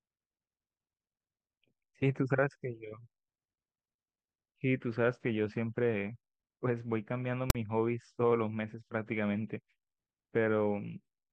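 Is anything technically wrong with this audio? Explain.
Yes. At 7.50 to 7.55 s in this speech, file tags played as audio: a text tag block was decoded as samples, giving a hard-edged, lopsided rasp that drops abruptly into silence from the zero padding.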